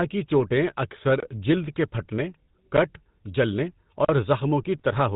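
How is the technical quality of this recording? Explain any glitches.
The recording is poor, with plainly audible phone-codec coloration throughout and three brief glitches.

GSM full-rate codec, whole clip: speech passes through a vocal-tract model driven by sparse pulses, consistent with 13 kbps GSM full rate. It sounds plainly buzzy and gravelly. A spectrogram shows nothing above 4 kHz and a coarse, pulse-striped harmonic texture.

GSM bit errors, 0.97–1.01 s and 4.79–4.82 s: corrupted bits reached the decoder, scrambling filter, pitch or gain values for a few frames. Each burst is a short squawk or gargle. On the spectrogram it appears as a smeared, misshapen block; the waveform may show a sudden level jump.

Block of digital silence, 4.05–4.09 s: about 43 ms of samples were replaced by zeros, which fits a missed 2048-sample output buffer. It is heard as a short hole. The waveform shows a flat line with abrupt edges, and the spectrogram a blank vertical strip.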